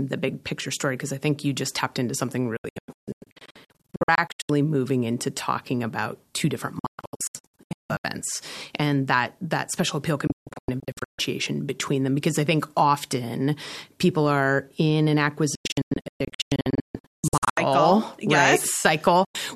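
Digital broadcast dropout breaks the speech at 2.57–4.50 s, 6.79–8.05 s, 10.27–11.19 s, 15.55–17.58 s and 19.25–19.35 s. The receiver muted on failed frames, so the first four stretches become clusters of short silences, runs up to 168 ms, cut almost instantly. Waveform and spectrogram show abrupt blank gaps.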